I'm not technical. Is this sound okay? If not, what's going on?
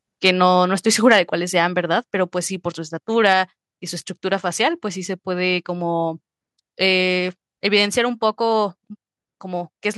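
No. Two problems can be heard in this speech.

The first is microphone overload, at 0.25 to 0.3 seconds, 1.11 to 1.18 seconds and 3.26 to 3.33 seconds. On those loudest moments the voice gets a brief harsh, crackly edge. The likely cause is that the microphone was set too sensitive, so the tops of the loudest sounds were chopped off. Only the peaks themselves are affected, and each lasts well under a tenth of a second.

The second is the microphone volume being stepped down, at 1.02, 2.04, 3.33 and 7.86 seconds. Here the voice and the background suddenly become a little quieter all at once, with no crackle. This is likely the call software noticing the level was too high and turning the microphone down a notch. Unlike the overload, it changes how loud everything is from that point on rather than roughening a single moment.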